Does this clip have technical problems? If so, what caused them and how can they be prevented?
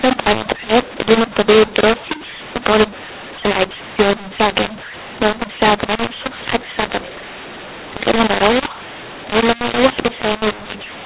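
Yes. A mu-law and A-law mix-up runs throughout the speech: the telephone audio was written with mu-law but read back as A-law, so each 8-bit code maps to the wrong level. Loud and soft parts are scrambled, speech turns harsh, and pauses fill with hiss instead of silence. The underlying 8 kHz mu-law coding is itself sound, capped below 4 kHz. To prevent it, make sure the decoder's companding law matches the one used to encode the stream, for example by checking the codec identifier or payload type.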